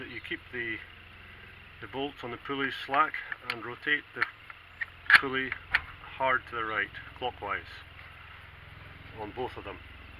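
No technical faults are audible anywhere in the audio.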